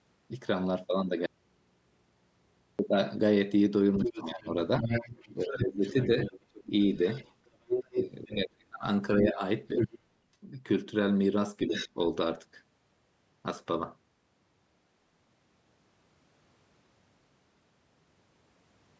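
At 1.26 s the speech drops out abruptly, and it does not return until 2.79 s, a gap of 1.53 s. This is an audio dropout to a faint residue. The gap is not silent. It holds a low mains hum, roughly 45 dB under the speech. The cause is likely a break in the signal feed while the input stayed live and picked up hum. The cut is sudden at both edges, not a pause or fade.

From 3.97 s to 9.99 s a second voice sits under the talker. This is the other side's voice leaking through. It is loud, only about 5 dB below the talker. The likely cause is the far end playing on a loudspeaker, with the echo canceller leaving much of it in the microphone signal. A shorter, quieter scrap follows from 11.66 to 11.89 s, about 10 dB down.

While that leak runs, the talker's own voice is pushed down. This is speech suppressed in double talk. From 4.03 to 6.71 s, about a second of speech dips, by up to about 20 dB. 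From 8.35 to 9.41 s, about 0.7 s is cut harder, by up to about 30 dB, so parts nearly vanish. At 11.67 to 11.98 s a brief dip of about 5 dB follows. The likely cause is the echo canceller failing to separate both voices, so it turns both down.

Throughout, the audio tops out at 8 kHz, which fits a wideband call microphone path.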